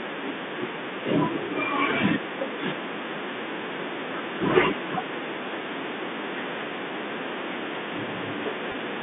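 At 8.72 to 8.74 s, near the very end of the speech, there is a packet loss with pitch repetition. About 20 ms of audio went missing, which fits a single lost packet, and the receiver filled the hole by replaying the last pitch period of the voice. It sounds like a brief, slightly buzzy hold on the sound rather than a silent gap or a click, which is what separates it from a plain dropout. Around it, the G.711 telephone coding keeps the narrow 250 Hz to 3.6 kHz line band.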